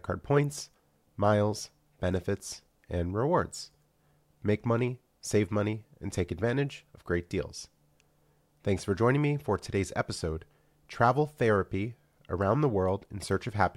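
No technical faults can be heard anywhere in this speech recording. Nothing at any point stands out as needing a time mark or an explanation.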